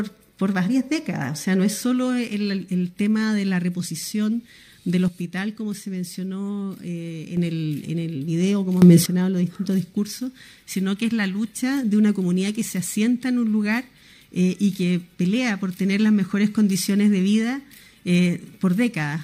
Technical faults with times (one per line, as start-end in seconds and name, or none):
5.08-7.37 sudden gain jump
8.82-9.06 sudden gain jump